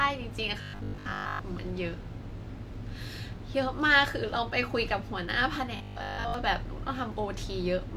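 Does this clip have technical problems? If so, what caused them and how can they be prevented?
Yes. From 0.61 to 1.41 s and from 5.76 to 6.34 s the speech becomes a rigid metallic 50 Hz buzz. This is robotic sound from repeated short buffers, likely caused by audio arriving too seldom, so the latest 20 ms chunk was replayed over and over for most of each stretch. A larger jitter buffer and a steadier network or processing load would prevent it.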